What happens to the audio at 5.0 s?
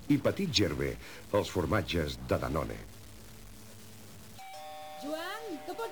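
At 5.00 s there is a brief blip: a corrupt frame was decoded. A single compressed frame reached the decoder with flipped bits and was played anyway, so misread gain values or spectral codes put energy at frequencies where none belonged, for roughly one frame's duration. The result is a short chirp-like burst peaking at about -35 dBFS.

Under that moment, as across the whole clip, there is a distortion, with a noise floor that persists in the quieter stretches instead of dropping away. The likely cause is a stuck bit: one bit in the sample data is held at a fixed value, so about half the samples are offset by that bit's weight in a pattern that follows the waveform. Near zero the error flips with the sign of the signal, which keeps the low-level passages noisy.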